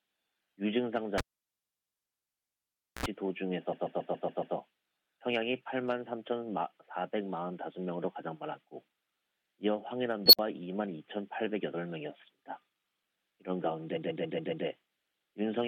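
At 1.18 s a cable is pulled and plugged in while the signal is live. A pop opens the gap, then the sound drops to near silence for about 1.5 s. A brief burst of 60 Hz mains buzz, lasting about 66 ms, follows as the plug's tip makes contact, and a second pop marks the return at 3.06 s. On a waveform the gap appears as a flat line bracketed by two sharp spikes, and the buzz shows on a spectrogram as short horizontal lines at 60 Hz and its harmonics.

Inside that disturbance, from 1.60 to 1.95 s, repeated frames cause a block of about 116 ms to play three extra times, adding roughly 0.35 s. Later, from 3.72 to 4.55 s, a 139 ms block repeats six extra times, adding about 0.84 s. In both cases the decoder is fed the same compressed data again, producing a rhythmic stutter. A waveform shows identical segments laid end to end, and a spectrogram shows the same pattern copied at regular intervals.

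At 10.26 s an unstable filter runs away. A tone around 4 kHz swells over about 71 ms into a piercing squeal and clips. The output then collapses into about 57 ms of silence until the filter resets at 10.39 s. On a spectrogram this is a single bright band that thickens and then cuts off abruptly. On the waveform it is an envelope that widens rapidly, flattens at the clip, and drops to silence.

From 13.96 to 14.65 s repeated frames return, with a 139 ms block played five extra times. This adds about 0.70 s of the same stutter and the same tiled look on both displays.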